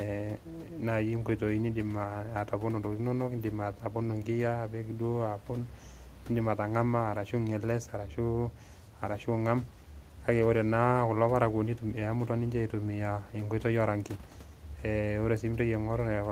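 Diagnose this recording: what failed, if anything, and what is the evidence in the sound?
Nothing failed; room noise sits about 28 dB below.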